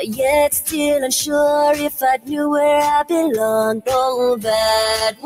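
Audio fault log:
Throughout: noise suppressor applied to music or sounds. A speech-oriented suppressor is treating steady parts of the sound as noise, so level rises and falls by around 5 dB. Sustains and tails flutter and thin. A spectrogram shows patchy, breathing energy between onsets.
1.89–2.31 s and 5.11–5.26 s: sound cut by the noise suppressor. The suppressor clamps down hardest here, with drops of about 17 dB and about 16 dB. Roughly a third of a second and then a brief final stretch sink or decay early. The waveform shows sudden dips, and the spectrogram shows dark gaps.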